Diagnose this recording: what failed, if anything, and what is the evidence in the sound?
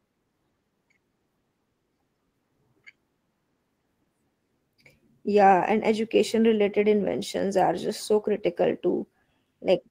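Nothing stood out on listening to this speech recording, and no failure at any stage could be heard.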